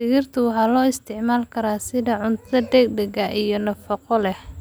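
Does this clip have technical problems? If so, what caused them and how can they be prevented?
No, no technical problems here.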